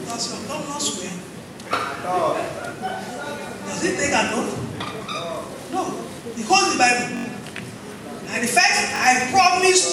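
You get a repeated buffer three times: at 0.41 s, 7.17 to 7.25 s, and 8.96 to 9.00 s. New audio arrived late, so the same roughly 21 ms chunk (fits a 1024-sample buffer) replays one, four and two extra times, stuttering at each hard join.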